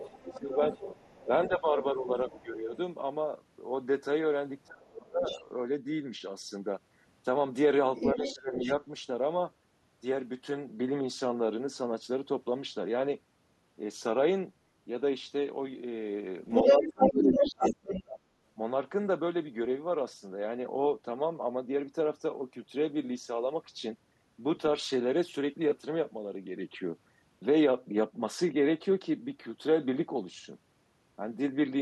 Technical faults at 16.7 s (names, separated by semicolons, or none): other side's voice leaking through; speech suppressed in double talk